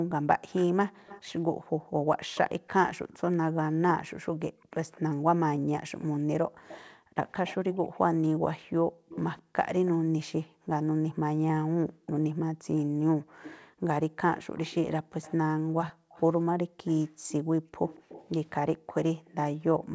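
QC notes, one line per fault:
0.61–3.19 s, 4.73–9.89 s, 13.43–19.94 s: echo leak. A delayed copy of the speech trails it by about 0.20, 0.21 and 0.23 s, at about 20, 15 and 20 dB below. It is likely loudspeaker pickup that the far end's echo canceller left in.
0.91–2.08 s, 4.52–4.71 s, 6.48–13.85 s, 15.62–18.88 s: background gated by the echo canceller. The room sound drops by up to about 40 dB, totalling roughly 0.7, 0.2, 2 and 1 s in the four spans, as suppression clamps the microphone during loudspeaker playback.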